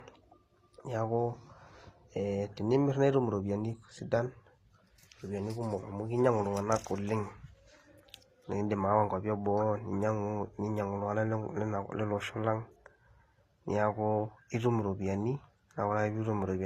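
From start to finish the speech carries two layers of damage: a swirly, watery smear with a grainy texture on top, and nothing above 14.9 kHz. That's likely transcoding between lossy codecs, which fits low-rate HE-AAC re-encoded to Opus, the second pass spending bits on the first pass's artefacts.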